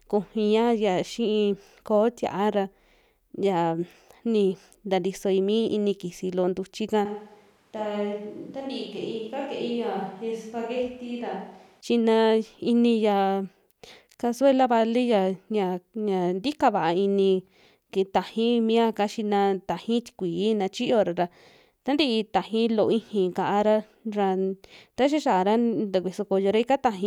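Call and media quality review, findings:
Switch to a distant microphone, 7.06–11.81 s, after "loo ntuchi'ka". Sound turns roomy, hollow, thinner in bass. Level drops roughly 10 dB; room noise rises. Likely close mic signal lost. Returns abruptly.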